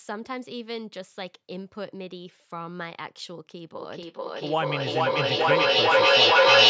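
Speech over a call, band-limited to about 8 kHz by the microphone processing. From 3.78 s to the end, a feedback echo between two devices builds up. Repeats return about every 0.4 s and pile up, reaching about 14 dB above the speech.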